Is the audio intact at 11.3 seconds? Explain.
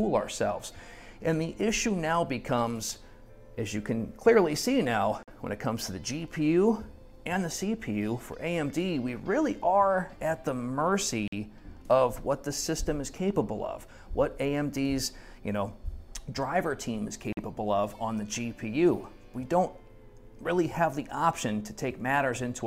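No. A gap between chunks interrupts the audio from 11.28 to 11.33 s, a silence of about 48 ms. The stream arrives in 6-second blocks, and this hole sits at a join. It sounds like a brief hole. Unlike a dropout, nothing is missing: the sound picks up exactly where it left off, so the same amount of audio is simply pushed slightly later.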